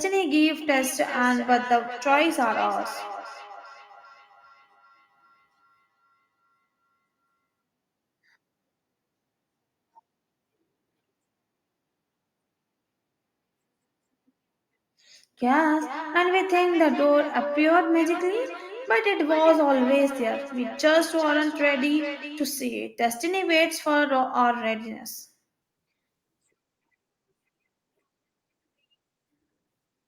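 From 0.61 to 7.45 s and again from 15.51 to 22.53 s, the speech returns roughly every 0.4 s at up to about 14 dB and then about 12 dB below it: feedback echo between two devices. Each pass through the second device's loudspeaker and microphone makes the repeats thinner and more ringing, unlike a single echo.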